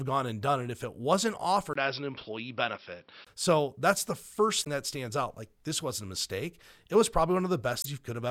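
After "it if it wasn't", from 1.73 to 3.27 s, the sound dulls behind a 20 ms gap, with nothing above 5.7 kHz and new noise about 45 dB down, likely an input switched to a poorer device. Damaged data in the compressed stream causes brief decoding glitches from 4.62 to 4.67 s, between "that's the" and "that stands out", and from 7.80 to 7.86 s, where the decoder misreads frames and resynchronises.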